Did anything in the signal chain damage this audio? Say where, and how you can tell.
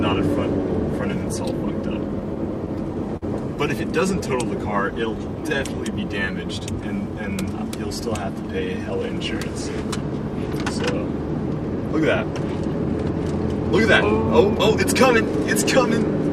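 Yes. From 2.35 to 3.24 s the sound drags and catches four times, the longest hold 50 ms, with nothing lost. These repeated stalls (stutter) are network damage: late packets emptied the jitter buffer, and the receiver extended the last sound, 83 ms in total.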